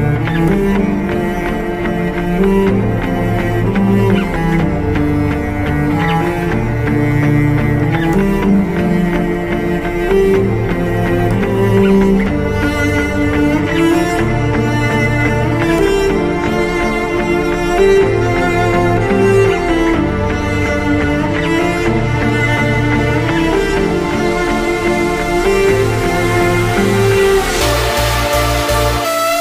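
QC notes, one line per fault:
No fault found, so there is no line per fault to give.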